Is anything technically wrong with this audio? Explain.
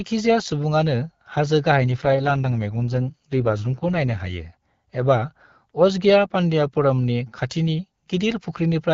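Yes. From 1.76 to 4.22 s the speech turns rougher, raspier and more synthetic, with no gap and no loss of bandwidth. This is an AMR rate drop: the network pushed the AMR-WB codec down to spend more bits on error protection, which fits a fall from 12.65 to 6.6 kbit/s before the rate recovered.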